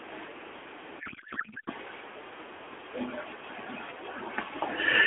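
From 1.00 to 1.70 s the speech collapses into garbled, warbling noise that barely tracks the talker, a classic codec payload misread. The decoder is reading AMR frames packed one way as if they were packed the other, which fits octet-aligned frames being parsed as bandwidth-efficient, so every field lands in the wrong place. The result is junk that looks valid to the decoder. It's heard through an AMR narrowband mobile codec path, lightly coloured and limited to 300 Hz to 3.4 kHz, consistent with the 12.2 kbps mode.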